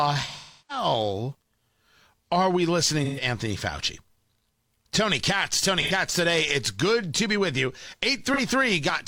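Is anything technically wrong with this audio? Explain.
Yes. The speech has AAC frame loss with concealment at 0.39–0.85 s, 3.04–3.23 s (just after "are we"), 5.82–5.92 s and 8.33–8.40 s (just after "to be with you"). Compressed frames went missing, and the decoder patched each gap by reusing the last good spectrum with reshuffled phase. The gaps, about 0.3, 0.13, 0.09 and 0.04 s, fit lost frames of roughly 43 ms each. Each sounds like a smeared, noisy, phasey stretch, longest near the start.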